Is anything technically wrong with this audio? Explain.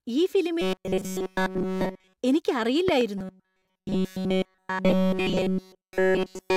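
Yes, there are two kinds of fault in this speech clip.

From 0.61 to 2.17 s and again from 3.18 s to the end, there is robotic sound from repeated short buffers. The speech becomes a rigid, metallic buzz at 188 Hz that loosely tracks the words. This likely happens because audio arrives too seldom and a chunk of about 5.3 ms is looped over and over, nearly all of it repeated. On a spectrogram this shows as evenly spaced horizontal harmonics of 188 Hz; the waveform shows an identical short cycle repeating.

Between 2.88 and 3.03 s there is a loud pop, heard as two sharp pops in quick succession that rise about 15 dB above the speech, which carries on beneath them. A sudden voltage step or pulse, likely from a switch, static or a driver glitch, is added to the signal and briefly shaped by the following circuitry. The waveform shows two tall spikes, and the spectrogram shows two thin vertical broadband lines.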